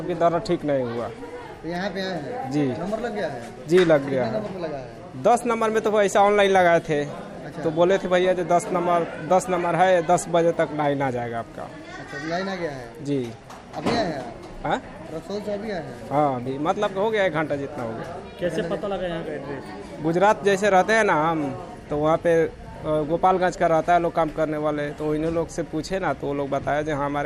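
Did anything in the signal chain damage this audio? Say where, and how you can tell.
No, nothing along the chain from wiring to playback left a mark I can hear, so there's no damaged stage to point to here.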